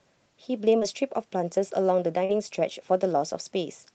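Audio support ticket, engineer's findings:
Short concealed packet loss at 0.79–0.83 s and 2.25–2.31 s. About 20 ms and 40 ms of audio missing, receiver extrapolated then crossfaded back: brief smear or wobble. Component: network/jitter buffer, under a call codec band-limited near 8 kHz.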